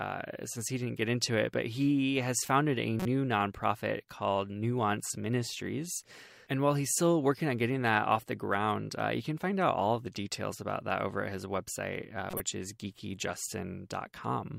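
At 3.00 to 3.05 s, between "he has founded a" and "nonprofit called", a corrupt frame decoded gives a short error peaking around -20 dBFS. Flipped bits put energy at the wrong frequencies. At 12.30 to 12.40 s, after "at his website uh", a longer error points to about four damaged frames.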